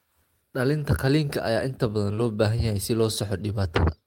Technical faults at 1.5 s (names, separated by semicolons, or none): none